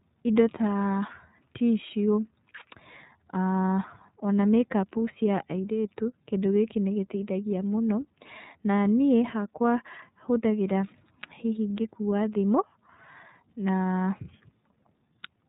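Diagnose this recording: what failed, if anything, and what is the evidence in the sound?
At the codec stage, the iLBC codec is audible across the whole clip: the speech is band-limited below 4 kHz and sounds plainly rough and synthetic. That points to the 30 ms, 13.33 kbps mode, where each frame's excitation is coded independently.

At the network stage, there are lost iLBC frames at about 5.61 s. A roughly 30 ms gap, which fits a single lost frame, is filled by a brief held, buzzy vowel-like sound. The decoder repeats the last pitch cycle mixed with noise, then recovers immediately.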